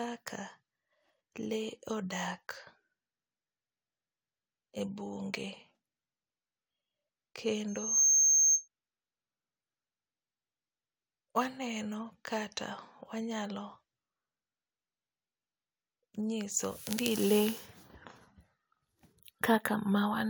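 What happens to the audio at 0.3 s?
Nothing goes wrong at 0.3 s; the speech is intact there, with no dropout, click or distortion.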